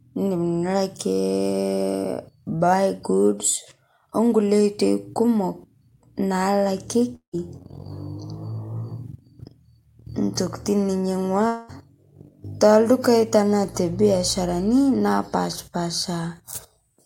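At 7.15 s the speech breaks off into a fading buzzy continuation of the last sound, followed by about 100 ms of silence before speech resumes at 7.35 s, about 180 ms of it gone. At 11.47 s a similar smeared tail covers the whole 220 ms gap until 11.70 s. Both fit a long network dropout, likely, with concealment filling the gap. On a spectrogram each shows smeared, decaying harmonics, and the first a blank band before the return.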